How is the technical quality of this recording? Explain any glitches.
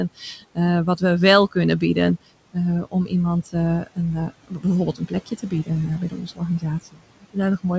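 The recording has two related problems, both from noise suppression acting on room noise that sits about 19 dB below the speech. The audio also stops at 8 kHz, which fits a wideband call codec such as G.722 at 64 kbps.

Noise suppressor artifacts, throughout: the suppressor pulls down the bands it judges to be steady noise, frame by frame, by about 18 dB. The background drops away in the pauses and returns under the speech.

Speech cut by the noise suppressor, from 0.16 to 0.58 s and from 1.51 to 7.65 s: the suppressor mistakes parts of the speech for noise and lowers them, by up to about 16 dB in the first stretch and 19 dB in the second. Across roughly 0.15 s and then about a second and a half in total, quiet consonants and word endings sound swallowed or faint.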